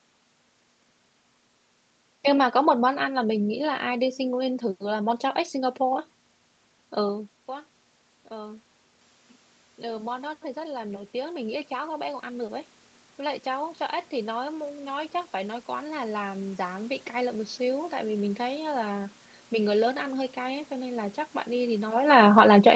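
From 9.8 s to 16.93 s, automatic gain rising occurs: after the input level fell by about 16 dB, the gain control judged the signal too quiet and slowly raised its gain by about 10 dB over those seven seconds. The speech climbs back toward its earlier loudness, and the room noise behind it swells along with it, so the background grows more prominent even though nothing in the room has changed.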